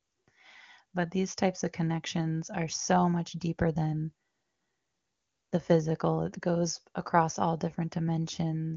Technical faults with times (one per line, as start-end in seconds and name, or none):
none